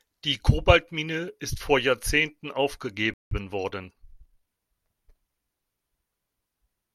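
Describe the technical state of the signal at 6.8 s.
At 6.8 s the speech signal is intact, with no dropout, distortion, glitch or other fault audible at that point.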